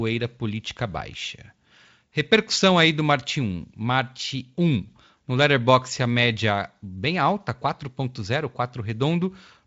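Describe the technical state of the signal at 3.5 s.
At 3.5 s the speech is intact, with no fault at that moment; it passes through the Speex codec at about 34 kbps with at most faint coding damage and a band that stops near 7.7 kHz.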